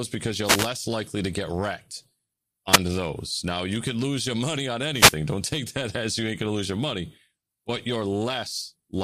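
Wireless microphone noise hits occur at 0.44 to 0.70 s, 2.71 to 2.79 s and 4.91 to 5.20 s. Each time, the radio signal fades. Receiver static swishes briefly over the speech.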